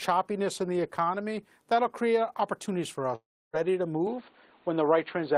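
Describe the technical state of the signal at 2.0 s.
At 2.0 s the speech signal is intact, with no dropout, distortion or other fault audible at that moment.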